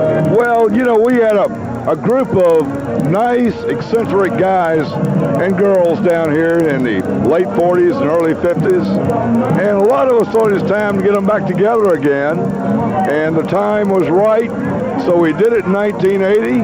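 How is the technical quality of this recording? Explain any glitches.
The recording is compromised by a single fault running through its whole length.

Resampler restarted on every block, from start to finish: the rate conversion, which points to a step from 16 kHz up to 48 kHz, processed each 50 ms block in isolation, so the filter at every block edge lacked the true neighbouring samples and left a small error there. Those errors recur 20 times a second, forming a rough buzz at the block rate that rides on the sound and vanishes whenever the signal drops out.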